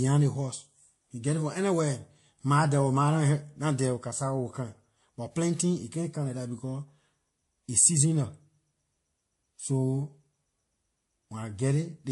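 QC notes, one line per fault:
Throughout: transcoding between lossy codecs. The speech has several layers of smeary, swirly artefacts at once, and nothing survives above 11.3 kHz. Likely a low-bitrate MP3 re-encoded through Vorbis and then WMA, each pass adding its own damage.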